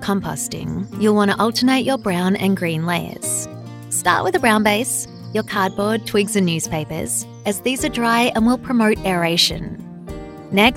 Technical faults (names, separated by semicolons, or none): none